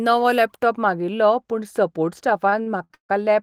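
Wrongly applied de-emphasis affects this speech clip from 0.63 s to the end: a treble cut meant to undo pre-emphasis slopes the response smoothly downward, leaving 10 kHz about 13 dB below 1 kHz, so the sound turns dull and muffled. Repeated stalls (stutter) follow from 2.49 s to 3.11 s, where the playback buffer ran dry four times as data arrived late. Each time the last sound was stretched to bridge the wait, about 276 ms in all and up to 151 ms at once, filling roughly 45% of that stretch. Nothing is lost, but the speech drags and stutters.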